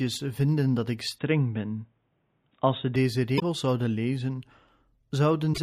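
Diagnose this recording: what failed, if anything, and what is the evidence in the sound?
Capture stage: from 1.18 to 2.96 s, after "vinden dat ik", the sound goes dull, with nothing above 3.8 kHz and no gap or level jump, likely an input switched to a poorer device.

Codec or storage stage: damaged data in a compressed stream gives short blips at 3.36–3.42 s, before "zouden lezen", and 5.50–5.58 s. The decoder loses sync and searches for the next frame header.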